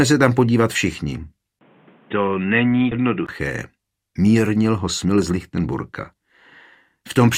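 The capture path appears to have changed devices partway through. From 1.59 s to 3.29 s the sound is what an input switched to a poorer device would likely produce, perhaps a second microphone or a headset's call profile. A 20 ms silence marks the changeover, and then everything above 3.8 kHz is gone. The audio turns dull and boxy, drops about 5 dB in level and picks up a fresh noise floor roughly 30 dB below the signal. Within that stretch, at 2.91 s, playback skips ahead. A run of audio was thrown away while later material was already queued, most plausibly by a jitter buffer clearing an overflow. Nothing fills the hole. Something like 0.4 s of sound is missing, and the material on either side of the cut is butted together with no pause, so the flow lurches forward abruptly. Later, from 4.86 s to 5.60 s, a jitter buffer speed-up sets in. The receiver was holding more audio than its target, so it trimmed many tiny slices of one or a few pitch periods each to bring the delay down, removing roughly a tenth of a second in total. 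Over that span the sound runs at about 112% of normal speed with its pitch unchanged, giving a rushed, hurried quality.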